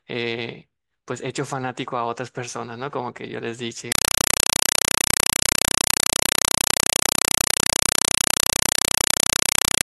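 From 3.92 s to the end, the speech gives way to a compressed stream played as audio: an AC-3 bitstream, consistent with 192 kbps, reaches the output undecoded. It sounds like harsh, very loud chattering static. On a waveform, 4 ms bursts alternate with flat zero padding 31.25 times a second. On a spectrogram, they show as evenly spaced broadband vertical stripes.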